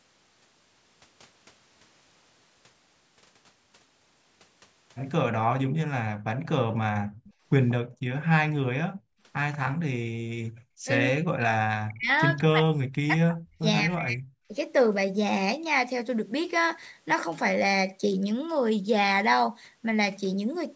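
Speech recorded through call microphone processing, with nothing above 8 kHz, and the echo canceller interferes in three ways. Background gated by the echo canceller shows up as the room sound dropping out while the loudspeaker plays, from 7.0 to 8.08 s (down by about 40 dB, roughly half a second in total), 8.9 to 9.2 s (about 36 dB) and 10.49 to 10.83 s (about 33 dB). The canceller clamps the microphone path hard during playback and releases it afterwards, so the ambience vanishes and returns. An echo leak is audible as a faint delayed copy of the voice, trailing the original by 188 ms: from 7.24 to 7.73 s at about 15 dB below the speech, again at 9.53 to 9.58 s at about 25 dB down, and as a brief scrap at 12.36 s at about 30 dB down. This is likely residual loudspeaker sound the canceller failed to subtract from the microphone signal, which was then sent back along the call. Between 10.86 and 14.53 s the talker's voice dips and breaks up in pieces, falling by roughly 40 dB at its deepest over roughly two seconds of the span. 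This is speech suppressed in double talk, likely caused by both sides speaking at once, so the canceller could not tell the local voice from the loudspeaker echo and attenuated both together.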